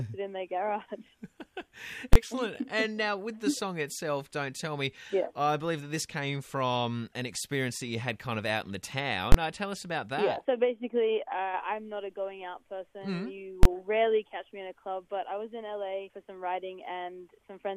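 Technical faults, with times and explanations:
2.13–2.16 s, 9.32–9.34 s and 13.63–13.65 s: invalid numbers at full scale. A calculation produced infinite or invalid values, and each was forced to the largest positive or negative sample, holding the output flat at one extreme value, far beyond the audio's peaks, for about 21 ms, which fits a 1024-sample processing block. With the block this short, the jump onto the extreme value and back off merges into a single loud bang each time.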